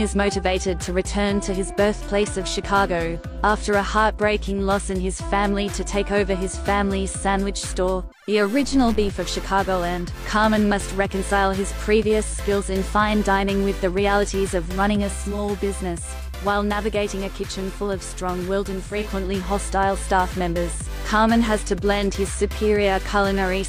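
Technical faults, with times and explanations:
15.03–19.17 s digital radio blending to analogue: the digital stream dropped and the audio cross-faded within half a second to FM and back, so level falls about 3 dB and faint hiss appears; spectrograms show raised noise, waveforms a slight dip.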